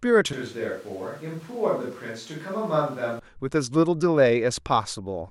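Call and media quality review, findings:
Switch to a distant microphone, 0.33 s to 3.19 s. Speech turns abruptly roomy and hollow, with thinner low end and a level drop of about 5 dB. Room noise rises to roughly 25 dB below the speech. Likely cause: the close mic dropped out and capture fell back to a far device, such as a camera mic, which picks up more reflections and ambience. Abrupt return to the close sound at 3.19 s.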